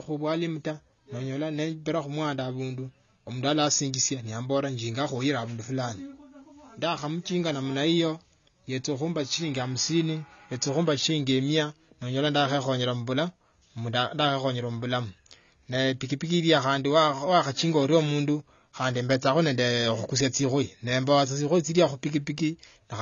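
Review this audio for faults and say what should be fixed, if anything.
Throughout the speech, the encoder likely ran AAC compression at too low a bitrate, which fits AAC-LC at about 24 kbps. Nothing survives above 6.9 kHz, so the sound is dull, and sibilants and sustained sounds carry a plainly audible smeared, warbling texture. Encode at a higher bitrate, or keep an uncompressed master, so the codec has enough bits to preserve the upper spectrum.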